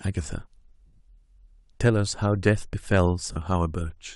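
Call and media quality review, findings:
Lost LE Audio frames, 0.86–1.00 s: speech smears into noisy, rough texture, about 120 ms missing across 140 ms, longest gap roughly 70 ms. 3.32–3.36 s: brief 40 ms smear. LC3 concealment repeating last spectrum with random signs over Bluetooth LE link dropouts.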